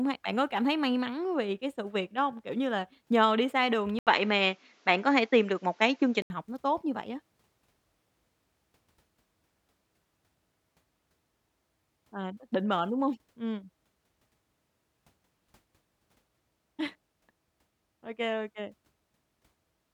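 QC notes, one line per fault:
3.99–6.30 s, input switched to a poorer device: speech dulls above 7.6 kHz after an 80 ms gap, with a level shift and faint new noise. Likely an input change.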